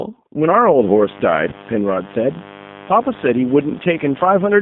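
Throughout, the speech carries G.729 codec damage: everything sits between about 150 Hz and 3.6 kHz, and the voice sounds rough and synthetic, which fits an 8 kbit/s G.729A line. A spectrogram shows a hard ceiling near 3.6 kHz and smeared, blocky formant detail.

From 0.78 s to the end, mains buzz enters: switching spikes locked to a 50 Hz supply produce a steady, raspy drone, well below the speech but clearly present. A spectrogram shows evenly spaced horizontal lines stacked upward from 50 Hz; the waveform carries a regular spiky ripple.

Between 1.50 and 1.55 s comes VoIP packet loss concealed by the speech codec. About 20 ms of audio went missing, and the decoder filled it by repeating its last pitch and filter at falling gain. The result is a brief buzzy, fading tone, and the voice stays weak and distorted for a short stretch afterward. A spectrogram shows flat harmonic streaks replacing the normal formant movement, and the waveform shows a decaying, overly regular segment.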